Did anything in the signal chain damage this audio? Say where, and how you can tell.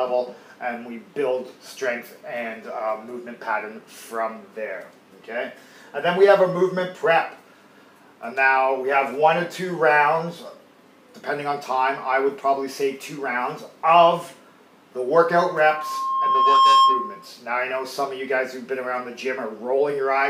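Yes. Loudspeaker feedback squeal enters in the acoustic loop between playback and microphone. From 15.27 to 17.31 s a steady 1.1 kHz tone swells over about a second and a half to roughly 10 dB above the sound. Loop gain there exceeded one.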